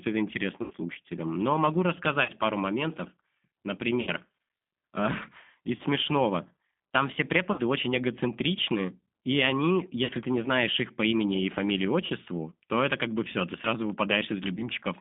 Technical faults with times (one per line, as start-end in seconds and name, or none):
0.00-15.01 G.729 codec
0.62-0.73 VoIP packet loss concealed by the speech codec
2.24-2.31 VoIP packet loss concealed by the speech codec
4.01-4.10 VoIP packet loss concealed by the speech codec
5.77-5.81 VoIP packet loss concealed by the speech codec
7.52-7.60 VoIP packet loss concealed by the speech codec
10.05-10.11 VoIP packet loss concealed by the speech codec
12.06-12.12 VoIP packet loss concealed by the speech codec
14.56-14.65 VoIP packet loss concealed by the speech codec